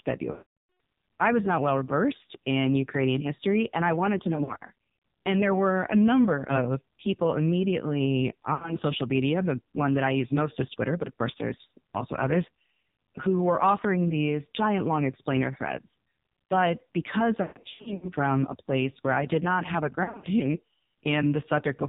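Throughout, the AMR narrowband mobile codec at a low 5.9 kbps cuts everything above 4 kHz and rebuilds the speech from a coarse vocal-tract model, leaving it buzzy and synthetic.

Lost AMR speech frames occur where radio errors failed checksums and the decoder repeated its last settings with fading gain. From 0.32 to 0.64 s the speech smears and fades out before "I was not well". From 4.36 to 4.63 s scattered brief dips and warbles occur. At 8.54 to 8.76 s, between "number of people immediately" and "social media", there is a short dropout. From 17.42 to 18.08 s drawn-out fades and rough recoveries repeat. At 20.04 to 20.27 s, after "did not have a", the sound warbles.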